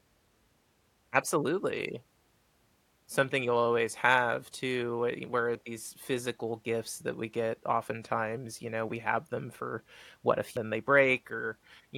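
At 5.55 s, between "always have too we" and "these physical gifts that", the speech lurches forward, and again at 10.57 s after "them for what a", with a longer gap. These are compressed frames skipped: whole 92.9 ms frames never played, about two (roughly 200 ms) then about ten (roughly 700 ms).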